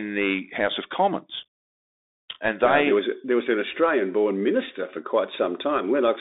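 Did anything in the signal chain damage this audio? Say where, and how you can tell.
Yes. Bluetooth CVSD headset codec damage runs throughout the speech, at the codec stage. The band sits between roughly 250 Hz and 3.7 kHz, and a granular hiss lies under everything. Sibilants come out scratchy, and loud bright passages distort. Those signs fit a 64 kbps CVSD link, where each sample is a single up-or-down bit and the adaptive step size can't keep pace with fast, high-energy changes, so it smears them into slope-overload grit.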